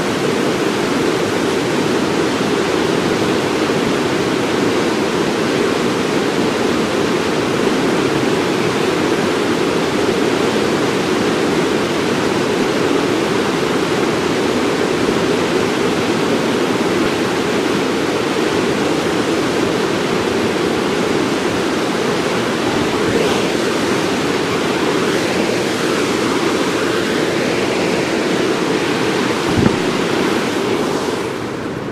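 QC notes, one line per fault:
17.04–17.06 s and 24.52–24.55 s, lost LE Audio frames: brief noisy smears about 20 and 30 ms long, where the LC3 decoder patched the gaps with recycled spectrum and scrambled signs.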